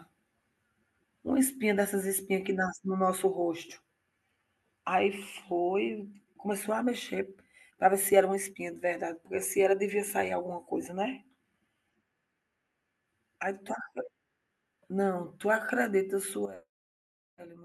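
At 16.46 s a sudden gain jump drops the speech and background noise together by about 12 dB, likely an unramped gain change, showing as an abrupt waveform step.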